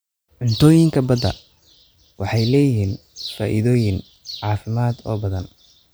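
A short speech recording with no audible technical faults, the signal staying steady and intact throughout.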